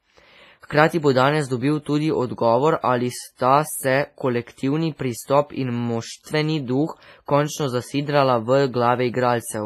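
Across the whole speech clip there is a ringing, washy quality, with hiss that swells and fades along with the signal. This is likely WMA compression with heavy damage that fits a low bitrate around 24 kbps. A spectrogram shows nothing above 15.5 kHz and patchy, smeared detail where weak components were dropped.

At 3.35 to 3.39 s, just after "dobil tudi odgovor ali", a 44 ms burst of hiss runs ahead of a sharp onset. The same pre-echo appears at 6.23 to 6.26 s, after "pristop in" and before "duh končno zasidrala v", spreading 34 ms. On a waveform or spectrogram, broadband noise fills the gap before each attack.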